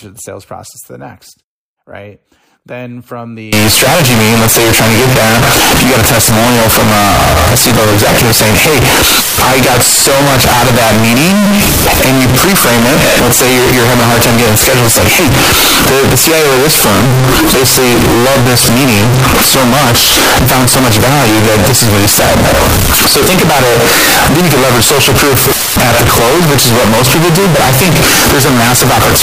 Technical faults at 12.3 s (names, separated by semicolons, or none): float read as integer